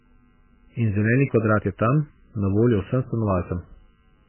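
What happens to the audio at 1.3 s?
The speech at 1.3 s, as everywhere in the clip, is dull and watery, with nothing above 3 kHz and a swirling, chirpy texture on the consonants. This is likely heavy MP3 compression at a very low bitrate, around 9 kbps. Starved of bits, the encoder cuts the treble and zeroes weak frequency lines that flicker on and off between frames. That flicker sets it apart from a plain low-pass filter, which would dull the sound cleanly without the warble.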